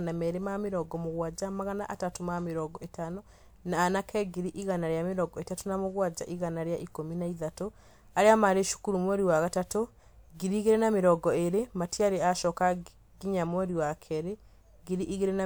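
No technical faults can be heard anywhere in this speech recording. There is no moment in it that needs a time or a value to be flagged.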